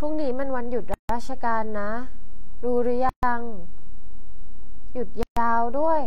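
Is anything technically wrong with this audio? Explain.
Yes, this speech recording has two problems. A gap at a join of encoded pieces occurs three times: 0.94 to 1.09 s (about 155 ms), 3.09 to 3.23 s (136 ms) and 5.23 to 5.37 s (136 ms), recurring about every 2 s. Segments were encoded separately and spliced without trimming, so each encoder's start-up delay and last-frame padding remain. The speech stops dead, sits in silence with slightly softened edges, then resumes exactly where it left off.

A DC offset runs through the entire clip: the waveform sits displaced from zero by a constant amount. You don't hear it as a sound, but it eats into the available headroom, so peaks reach clipping sooner on one side. It also appears as steady energy at the very bottom of the spectrum. A high-pass filter or DC removal would recentre it.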